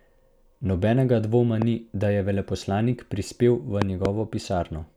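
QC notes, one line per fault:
1.62–1.64 s, loud pop: a single sharp thump about 15 dB above the speech, just before "ni da je veleposlanik". It is likely a voltage step from a plug, switch or static discharge that the following circuitry shaped into a rounded pulse. It has more low-frequency body than a tick-like click, and the speech continues unbroken underneath.
3.82–4.07 s, loud pop: two pops in quick succession, peaking about 20 dB above the speech, right after "da je veleposlanik prispel". This is likely a brief electrical disturbance that produced a pair of pulses. Unlike a dropout, the sound carries on beneath both thumps rather than cutting out.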